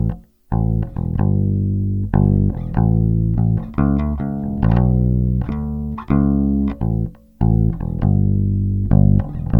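No technical faults are audible.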